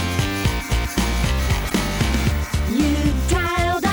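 The audio has one fault: damaged data in a compressed stream, from 1.66 to 1.72 s. Corrupted bytes there leave the decoder unable to read the affected frames, so it loses sync and hunts for the next valid header, producing a brief glitch of about 60 ms.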